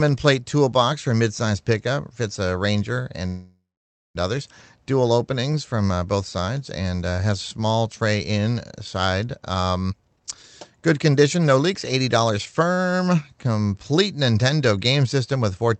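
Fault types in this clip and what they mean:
Call audio freeze: packets stalled and the jitter buffer likely ran dry, so the speech was held as a fading buzz or hiss and then silence, opening a gap of about 0.9 s.
Jitter buffer speed-up: the receiver trimmed short pitch-period pieces to clear excess buffered delay, so from 9.89 to 13.22 s speech runs about 26% faster at unchanged pitch.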